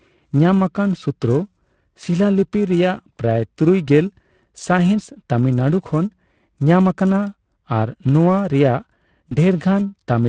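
Throughout, the speech sounds hoarse and grainy, with a noisy, papery top end and plainly audible codec damage. This is the Speex codec at a middling setting, consistent with roughly 16.8 kbps. Its CELP excitation has too few bits, and the high band is filled with shaped noise rather than real detail.

Also present across the whole clip is a rough, metallic edge on the voiced sound that disappears in the pauses. This is periodic clock jitter: the converter's clock is being shaken at around 1 kHz. That puts sidebands about that far above and below every component, and they are most noticeable on the brighter parts of the speech.

From 9.29 to 9.37 s, the speech briefly smears into a stretched sound that weakens and then recovers, staying weak or distorted for a moment. This is VoIP packet loss concealed by the speech codec. The gap fits a single lost 20 ms frame. The decoder extrapolated from its last pitch and filter with falling gain, and the effect carries on for a short while after packets resume.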